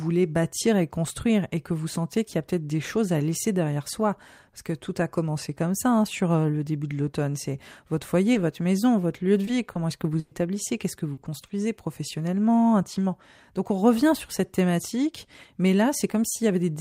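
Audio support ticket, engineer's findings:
Brief smears at 8.33 s (just before "votre maison votre lieu"), 9.45 s (after "maison votre lieu de") and 9.73 s. Short concealed packet loss, about 20 ms each, in the network/jitter-buffer path. Decoder extended the previous speech to cover the gap, then crossfaded back.

Held, fading tail with no dropout to silence, 10.19–10.33 s. Burst of packet loss: about 120 ms never arrived in time, bridged by decoder concealment that continues and fades the last sound. The speech resumes later, and that stretch of content is gone.

Choppy, robotic stretch, 11.13–11.51 s, just before "professionnellement intimement". Repeated packet loss: four separate gaps, longest 40 ms, about 100 ms patched in total, so roughly a quarter of the span is concealment. Points to an unstable link causing recurring late or dropped packets.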